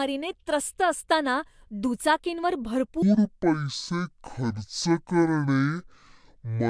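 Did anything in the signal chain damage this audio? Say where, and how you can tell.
Yes. From 3.02 s to the end of the clip the speech drops to half speed and falls a full octave, 12 semitones, with pitch and tempo shifting together. That locked pairing identifies a wrong sample rate at the playback stage. The samples are being clocked out at roughly half the rate they were captured at, with no resampling in between. The 0.5 ratio fits audio recorded at 44.1 kHz but played back at about 22 kHz.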